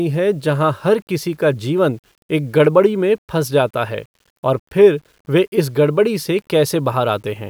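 From start to finish the speech has a grainy, signal-following grit, the telltale of low bit depth without dither. It's likely been rounded down to something like 9 bits, leaving error roughly 45 dB under the level that roughens quiet passages and tails.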